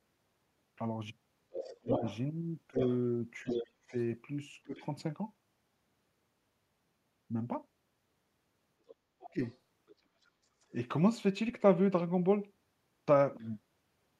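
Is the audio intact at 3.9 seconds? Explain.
No. From 1.51 to 4.77 s, the other side's voice is leaking through. A second voice runs under the main one, only a little quieter. The likely cause is a loudspeaker echo that the echo canceller failed to remove from the microphone.

From 1.78 to 4.83 s, speech is suppressed in double talk. While both voices overlap, the main voice dips in pieces, sometimes by about 35 dB. The drops add up to roughly 0.7 s. The canceller seems to have treated the overlap as echo and turned everything down.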